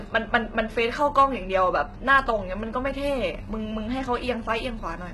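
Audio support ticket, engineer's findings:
HE-AAC compression, throughout the speech. Upper band sounds synthetic: s sounds gritty and lispy, treble metallic, heavy damage overall. Likely cause: HE-AAC encode at a very low rate, sound consistent with about 16 kbps. Spectral band replication copies lower bands upward under a coarse envelope, so harmonics break at the crossover. Spectrogram: harmonic stack below the split, blocky repeated texture above it, fricatives smeared rather than sharp.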